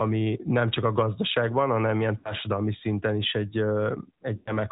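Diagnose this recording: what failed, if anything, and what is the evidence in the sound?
The whole clip runs through an AMR narrowband mobile codec. Nothing survives above 4 kHz, and the speech has that buzzy, synthetic edge from the vocal-tract model, plainly audible here. It sounds like a mid-rate mode, which fits the 10.2 kbps setting.

There are lost AMR speech frames in the network/radio leg, at 2.18–2.34 s and 4.36–4.52 s. The decoder stretches the last good pitch and spectrum with falling gain, so you get a smeared, fading tail. That fits about 60 ms and 100 ms missing, three and five 20 ms frames.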